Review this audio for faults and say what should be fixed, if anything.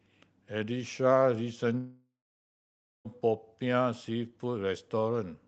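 A long network dropout, most likely a stretch of lost packets, runs from 1.77 s to 3.07 s. The receiver stretches the last sound into a fading buzz, then leaves about 0.9 s of near silence before the speech resumes with about 1.3 s missing. Forward error correction and a steadier network path would prevent this.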